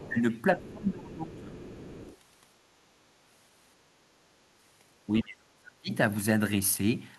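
Right at the start, from 0.0 to 0.13 s, a faint second voice sits about 20 dB under the speech. This is the other side's voice leaking through, likely loudspeaker playback that the echo canceller failed to remove from the microphone. From 0.08 to 0.17 s the talker's own voice dips by roughly 10 dB. That is speech suppressed in double talk, likely the canceller turning everything down because it could not tell the talker from the echo while both were active.

A longer dip follows from 0.56 to 1.59 s, about a second of speech pulled down by around 20 dB. Within it, brief scraps of the far voice poke through at 0.66 to 0.71 s and 1.32 to 1.41 s, some 25 dB below the speech. Once that dip ends, the leaked voice carries on more steadily from 1.59 to 2.16 s, about 20 dB down.

The deepest suppression comes at 5.22 to 5.91 s. There the talker drops by roughly 40 dB for most of that stretch, nearly cutting out.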